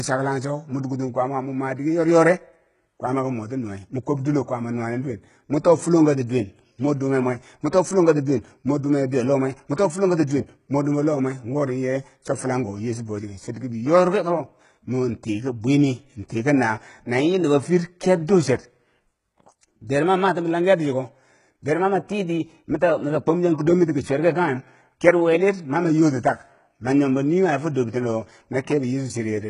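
From start to finish the speech has a synthetic, papery treble: s sounds come out gritty and lispy, and the upper band has a metallic sheen that does not follow the pitch of the lower harmonics. Nothing is present above 11 kHz, and the damage is heavy. The likely cause is HE-AAC compression at a very low bitrate, consistent with roughly 12 kbps, where spectral band replication copies lower bands upward under a coarse envelope instead of coding the real treble.

From 9.74 to 9.78 s there is pre-echo: a brief wash of hiss, about 40 ms long, arrives ahead of a sharp onset, and the attack itself lands soft and smeared rather than crisp. The transform block containing that onset spread its quantisation noise across its full length, so noise scaled for the loud transient also fills the quiet moment before it, where nothing masks it.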